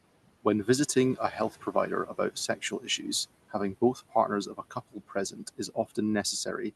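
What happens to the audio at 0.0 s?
Noise suppressor artifacts are present from 0.0 s and run through the clip: the room noise is pulled down by about 18 dB between phrases, then rises under the speech.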